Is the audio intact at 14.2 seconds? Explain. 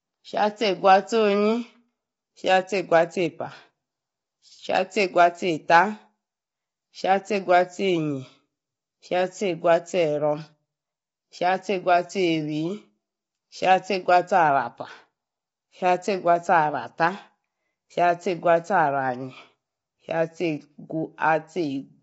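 No. At 14.2 s, as throughout, rough, grainy sound with noise between harmonics points to likely low-delay AAC compression at a low bitrate; a spectrogram shows smeared harmonics and nothing above 7.8 kHz.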